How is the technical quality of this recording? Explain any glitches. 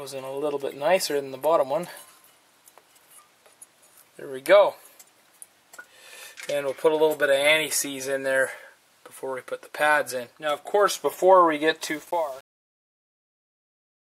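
The recording's ending has a fault. It turns gritty as it fades out.

Truncation distortion on the fade runs from 11.82 s to 14.05 s, during the fade-out. The volume stage drops low bits without adding dither, and the coarse steps heard here fit about a 7-bit word length. As the level falls toward the smallest step, the waveform collapses into a few square steps. The tail turns gritty instead of thinning away smoothly.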